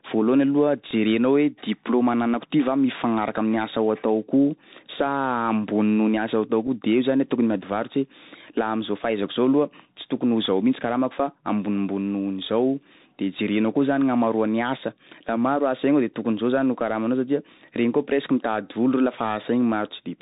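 Speech carried over a Bluetooth CVSD headset codec throughout: nothing passes above 4 kHz, and the granular hiss and scratchy sibilants that fit a 64 kbps one-bit delta stream set it apart from ordinary telephone band-limiting. A Bluetooth headset packet repeated gives a tiny tick at 0.91 s, fitting one re-decoded packet, and a slightly longer 7.5 ms blip at 6.67 s, fitting two; both are too short to build the steady 267 Hz buzz of a longer run.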